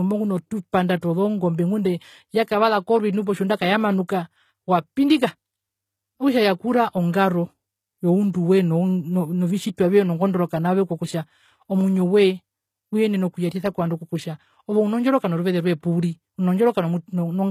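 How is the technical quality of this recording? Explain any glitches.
The quality is held back by one fault that runs through the whole clip: low-bitrate audio saved at a high bitrate. From start to finish, nothing in the speech reaches above about 14.9 kHz, and it carries the artefacts of a very lean encode. That likely means the audio was first squeezed through a low-bitrate codec, something in the range of HE-AAC at around 20 kbit/s, and then re-saved as a roomy MP3, possibly at 192 kbit/s. The bigger second file can't put back what the first pass threw away.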